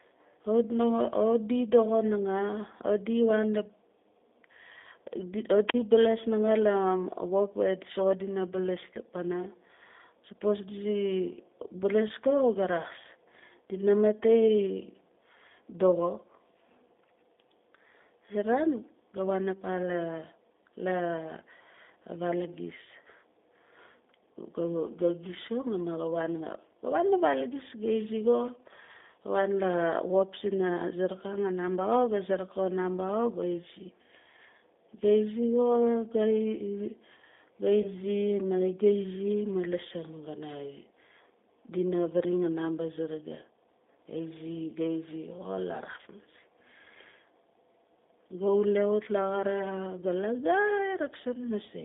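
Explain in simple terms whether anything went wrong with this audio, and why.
G.729 codec, throughout the whole recording: the speech passed through a phone-call codec that doesn't send the actual sound. It sends a compact description: the shape of the vocal tract, the pitch, and a few pulses, and the far end rebuilds the speech from that. Only a narrow band gets through, roughly 250 Hz to 3.6 kHz, so everything sounds thin and boxy, and the rebuilding is plainly audible as a rough, slightly synthetic edge on every sound.

Wireless microphone squelch dropout, from 5.67 to 5.74 s: the radio link between the microphone and its receiver weakened for a moment. When a receiver can't hear its transmitter well, it switches its own output off so it won't play loud static. Here you hear a short burst of hiss, then a hole of near silence lasting about 42 ms, and then the speech comes back.

VoIP packet loss concealed by the speech codec, from 37.82 to 37.88 s: about 20 ms of the call never arrived, which fits a single lost packet. 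Instead of leaving silence, the decoder guessed by repeating the last pitch and voice shape at a falling volume. That produces a brief smeared patch, a buzzy tone or a coloured noise that fades. Each moment is built on the one before, so the speech stays weak or warped for a little while after real data returns.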